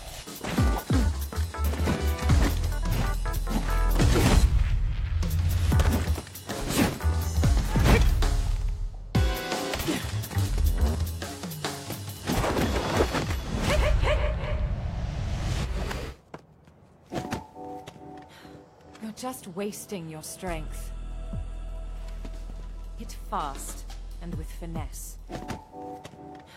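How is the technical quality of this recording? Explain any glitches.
No glitches or faults detected.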